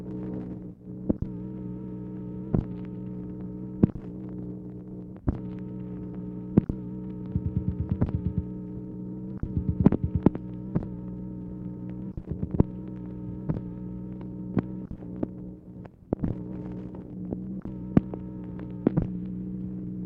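No technical faults can be heard anywhere in the audio; the signal stays steady and intact throughout.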